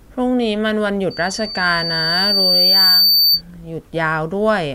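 From 1.10 s to 3.42 s a thin, piercing tone at 4.6 kHz rises out of the speech. It starts faint and swells over about two seconds into a steady squeal that ends up somewhat louder than the speech itself. This is loudspeaker feedback squeal. A microphone was picking up the loudspeaker it was driving, and at 4.6 kHz the loop's gain exceeded one, so that frequency kept reinforcing itself each time around.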